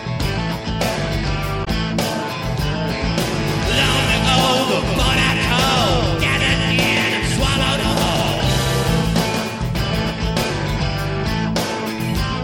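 At 1.61 to 1.68 s there's damaged data in the compressed stream: the decoder loses sync on corrupt frames, giving a brief glitch. From 3.48 to 10.42 s we get a doubled audio track, a dry copy trailing about 0.2 s behind, a few dB quieter, that starts and stops abruptly, likely from a second, slower capture path.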